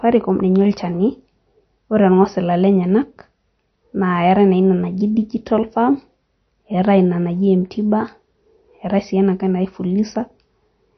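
From start to finish the speech sounds dull and watery, with nothing above 6.1 kHz. That is likely MP3 compression at a low bitrate, which fits roughly 32 kbps. Short of bits, the encoder cut the treble and dropped faint frequency detail frame by frame, leaving plainly audible swirl.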